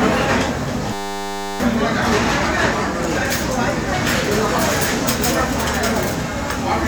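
A system hang loop from 0.93 to 1.6 s freezes this everyday-sound clip: a 10 ms buffer repeats, giving a steady 100 Hz buzz and losing about 0.7 s of audio.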